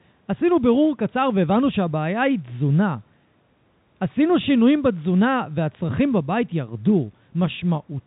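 No technical faults are audible.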